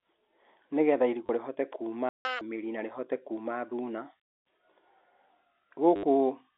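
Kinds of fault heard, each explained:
Packet loss with last packet repeated: When packets go missing, the receiver keeps replaying the last one it got until fresh audio shows up, and the joins don't line up with the pitch, so you get a short robotic stutter. Here it happens twice: a 30 ms patch at 1.26 s, and a longer 70 ms one from 5.96 to 6.03 s. The stutter rate suggests 10 ms packets, giving a buzz around 100 Hz.
Playback stall: The sound simply drops out mid-flow for about 160 ms, from 2.09 to 2.25 s, then resumes right before "mĩri na rĩhote kuma". It's a dead gap rather than a fade or a glitchy repeat, which most likely means the player ran dry of buffered data or its audio thread got held up for a moment before recovering and carrying on.
Catch-up at higher speed: Right after that stall, from 2.25 to 2.41 s, the player races through its backlog at double speed to claw back the lost time. 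Because it does this by resampling, the pitch jumps too, roughly ten semitones, so the start of "mĩri na rĩhote kuma" comes out squeaky and rushed. Then it settles back to normal speed and pitch, all over the telephone-band G.711 sound of the line.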